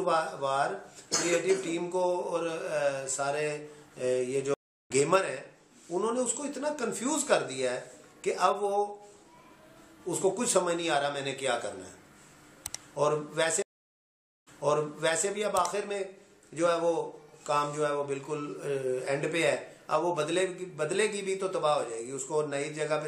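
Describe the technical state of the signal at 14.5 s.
At 14.5 s the signal is within a stream reconnect spanning 13.62 to 15.28 s, which includes a dead silence of about 0.84 s. The connection broke, and a fresh decoder resumes mid-stream about 0.81 s earlier, repeating sound already heard.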